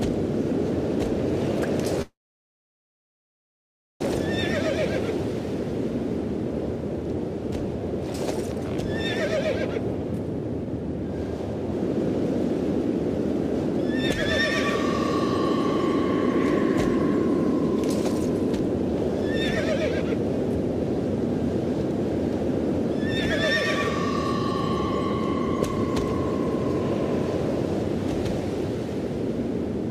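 At 2.02 s the sound stops and a brief fading continuation gives way to near-silence lasting about 1.9 s, before the audio resumes at 4.02 s where it left off. This is a call audio freeze, likely from delayed packets draining the jitter buffer, adding about 2 s of delay.

From 9.80 to 11.39 s a jitter buffer speed-up runs the audio at 102% of normal speed with unchanged pitch. The receiver trimmed short pitch-period segments, around 40 ms in total, to shrink an overfilled buffer.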